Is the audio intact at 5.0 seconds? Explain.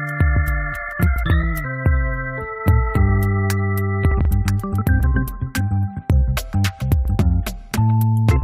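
No. At 5.03 s there is damaged data in the compressed stream. Some of the coded bytes there are corrupt. The decoder misreads that frame, loses its place and hunts for the next valid frame start. The result is a brief chirp or blip.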